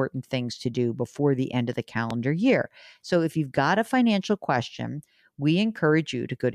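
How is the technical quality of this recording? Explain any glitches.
The recording has one clear glitch, a single loud pop from 2.11 to 2.13 s. It is a sharp thump standing well above the speech, likely caused by a voltage pulse from a plug, switch or static. Unlike a dropout, the speech carries on underneath without a gap.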